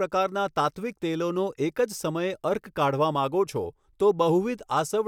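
No faults are audible anywhere in the recording; the speech runs without dropouts, clicks, distortion or level jumps.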